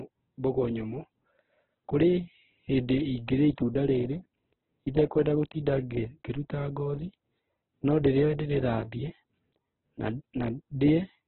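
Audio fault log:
Throughout: Opus compression, heavy. The top of the speech band is cut away, so the sound is narrowband and dull. The tone is rough, grainy and noisy rather than swirling. This is likely Opus running in its music (CELT) mode at a very low bitrate, which fits about 8 kbps. Starved of bits, the encoder keeps each band's energy but fills the detail by folding lower bands or inserting noise, which turns clean harmonics gritty.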